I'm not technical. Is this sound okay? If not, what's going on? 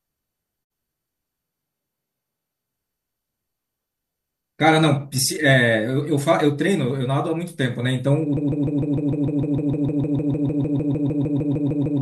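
No. There are three separate problems.

A digital broadcast dropout happens at 0.63 s and lasts until about 0.72 s. The sound fades out over a few hundredths of a second and goes silent. The receiver stopped getting usable data, which fits a couple of damaged frames, so it muted instead of playing garbage. Roughly 48 milliseconds of the original are missing and can't be recovered. The speech then picks up where the good data resumes.

Between 1.42 s and 2.72 s the speech suddenly sounds hollow, roomy and thinner in the low end, with more room noise underneath it. The loudness stays about the same. This is most likely a switch to a distant microphone. The close microphone's signal dropped out and a microphone further from the speaker filled in, so you hear more of the room. At 2.72 s the close sound snaps back.

From 8.37 s to the very end there is a broken-record loop. The same tiny slice of sound, about 0.15 seconds long, repeats over and over with no gaps, giving a stuttering, machine-gun effect. 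The likely cause is that the player or stream froze and kept resending the last piece it had. Whatever should have been heard in those final seconds is lost.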